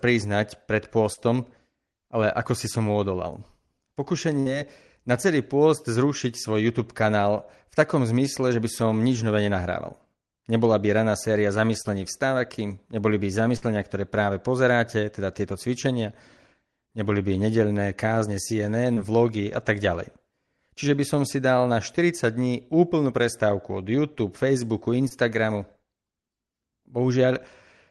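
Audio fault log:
1.13, 11.82, 18.94 and 25.08 s, short concealed packet loss: a few hundredths of a second of the call arrived too late each time, and the receiver patched the holes (roughly 35, 32, 25 and 18 ms) by stretching out whatever came just before, then blending back into the real audio. You hear a brief smear or tiny wobble, and a quick consonant can get swallowed. The one at 18.94 s sits just before "vlogy a tak ďalej".
4.40 and 13.57 s, burst of packet loss: here a longer chunk went missing, around 60 ms in both, so the concealment had to run for about 59 and 53 ms, continuing the last sound and fading it out as the gap wore on. That gives a short held buzz or dying hiss, then the audio picks up further along with a slice simply gone. The second one lands right before "ktoré práve".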